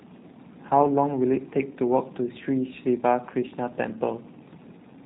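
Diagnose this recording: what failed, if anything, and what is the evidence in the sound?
The codec stage is at fault. G.729 coding damage is plainly audible across the whole speech clip. The audio has no content above 4 kHz, so sibilants sound dull. The speech also sounds slightly rough and synthetic. This fits a low-rate G.729-family codec at about 8 kbit/s. It rebuilds each 10 ms frame from a vocal tract filter, a pitch predictor and a few pulses. The fine detail of the original waveform is discarded.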